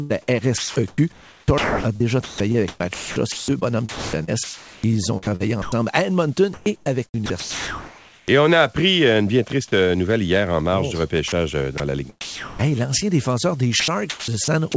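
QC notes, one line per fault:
0.58–5.72 s, 6.54–8.28 s, 11.28–12.66 s and 13.68–14.74 s: sound chopped by the voice detector. Quiet stretches are cut out and filled with synthetic hiss, about 2.5 s, 1.2 s, 0.44 s and 0.34 s in turn. The speech has holes. The likely cause is a sender-side detector toggling transmission. The third run falls between "hier en marge du" and "l'ancien défenseur", and the last follows "l'ancien défenseur".
9.48 s: sound dropped by the voice detector. A 20 ms slice between "appris euh une bien" and "euh nouvelle hier en" is swapped for steady comfort noise. It is a brief dip, then speech resumes. The likely cause is the detector briefly mistaking quiet speech for background.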